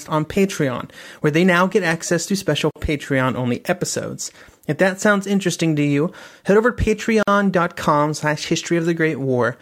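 Speech with two brief silent breaks, at 2.71 s after "get access to special" and 7.23 s after "you head over to", each about 48 ms: a gap at a join of encoded pieces, where untrimmed encoder delay and end padding remain.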